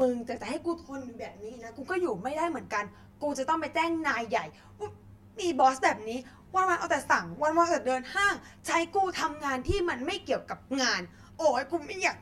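Speech, with channel delay (comb filtering) throughout: one channel arrives roughly 10 ms late before mono summing, cutting evenly spaced notches from around 40 Hz upward, leaving it hollow and phasey.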